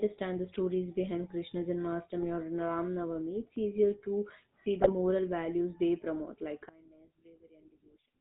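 Throughout, the speech carries the buzzy, gravelly roughness of the GSM full-rate codec, which fits 13 kbps. It rebuilds the voice from a vocal-tract model driven by sparse pulses. A spectrogram shows nothing above 4 kHz and smeared, grainy harmonics below it.

GSM bit errors break the voice into squawks and gargling from 2.18 to 2.27 s, and again from 4.80 to 4.92 s, just before "values they promote like". Corrupted filter, pitch and gain values garble a handful of frames. Each burst shows as a spike or jagged block on the waveform, with a distorted, misplaced spectral band.

From 6.69 s to the end, after "values they promote like", the voice drops by about 23 dB to a faint copy. This is likely one channel inverted, so the centred voice cancels in a mono sum. The waveform visibly shrinks, and the spectrogram thins out.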